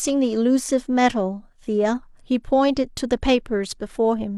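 No technical faults can be heard in this speech recording. Nothing in the audio calls for a time or a description.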